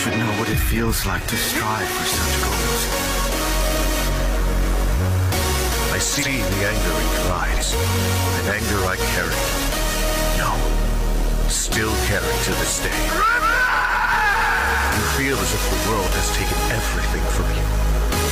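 Around 6.16 to 6.28 s, and again at 7.51 to 7.63 s, there's a short garbled flutter. That's frames out of order: two neighbouring chunks, which fits single frames of about 46 ms, got swapped, so each stretch plays with its halves exchanged with nothing lost.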